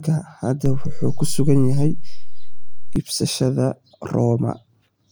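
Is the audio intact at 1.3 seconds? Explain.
No. At 1.3 s the audio sits inside a DC step running from 0.66 to 2.96 s, where the waveform's zero line jumps by about -16 dBFS. The step gives a low thump or click, but unlike a dropout, the speech continues unchanged throughout.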